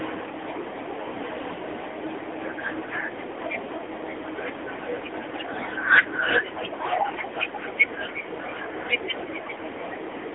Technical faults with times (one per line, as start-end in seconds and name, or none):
0.00-10.35 AMR narrowband mobile codec